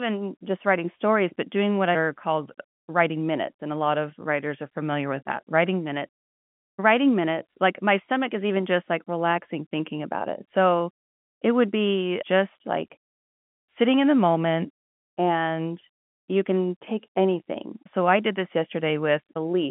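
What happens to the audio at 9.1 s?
Nothing goes wrong at 9.1 s; the speech carries on intact through that moment, heard through the narrow G.711 telephone band that stops a little short of 4 kHz.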